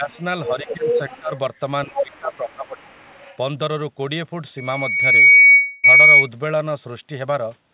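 From the very start, 0 to 0.14 s, the talker's level dips by about 10 dB for roughly a tenth of a second. This is speech suppressed in double talk. The likely cause is an echo canceller that could not tell the near voice from loudspeaker echo and turned the whole signal down. Just after, from 0.11 to 0.17 s, a trace of the other side's voice leaking through is present, about 40 dB below the speech.

The same pair returns more strongly. From 0.45 to 1.19 s the other side's voice leaks through at only about 10 dB below the talker. This is likely echo that the canceller left in the microphone signal. Overlapping it, from 0.49 to 1.32 s, the talker is ducked by about 15 dB in pieces totalling under half a second, and the speech drops and thins while the far side is active. A third suppression episode runs from 1.85 to 2.77 s, again about 15 dB deep and chopping out most of that stretch. Within it, from 1.95 to 2.35 s, the far voice again leaks in at about 10 dB down. 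A fainter residual echo follows from 2.83 to 3.36 s, about 35 dB below the speech.

From 4.57 to 6.29 s a loudspeaker feedback squeal appears: a single tone at 2.2 kHz that swells over about 0.7 s to roughly 15 dB above the programme. The microphone is picking up the loudspeaker it feeds, and at that frequency the loop gain exceeds unity, so the tone keeps growing on its own.

During the squeal, short concealed packet loss occurs at 5.30 to 5.34 s and at 5.42 to 5.46 s. Each hole is about 20 ms of missing audio that the receiver bridged by extending the preceding sound, heard as a brief smear or wobble.

From 5.54 to 5.86 s comes a long network dropout. About 300 ms of audio is missing, likely because packets stopped arriving. The receiver fills the entire gap with a continuation of the last sound that fades rather than falling to silence, and the audio then resumes with that stretch lost.

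Throughout, the call path shows nothing above 4 kHz, which fits G.711 mu-law at 64 kbit/s.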